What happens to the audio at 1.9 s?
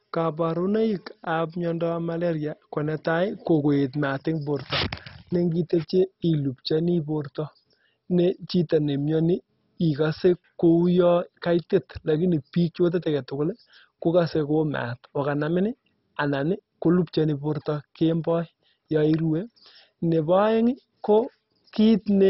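MP2 compression damage is present at 1.9 s, as it is for the whole clip. The speech is dull, with nothing above about 5.6 kHz, and a gurgling, grainy distortion runs through it. The likely cause is MPEG Layer II coding at a very low rate, which fits around 32 kbps. With so few bits, the encoder switches off the upper sub-bands entirely, lets bands flicker on and off, and quantises the remaining ones so coarsely that they sound granular.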